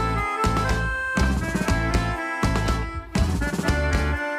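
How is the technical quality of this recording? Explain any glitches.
Nothing stood out on listening; no glitches were apparent anywhere in the recording.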